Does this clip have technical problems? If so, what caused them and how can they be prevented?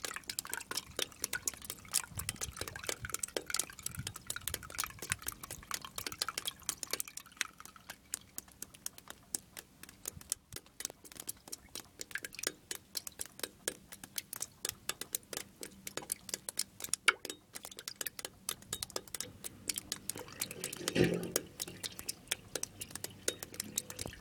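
Yes. A sudden voltage step, likely from a connector being disturbed, a switch, static or a driver glitch, entered the signal path. The result is a single loud pop from 16.89 to 16.91 s, peaking a few decibels above the surrounding sound, which continues underneath. Secure cables and connections, avoid switching during recording, and keep equipment grounded and drivers stable.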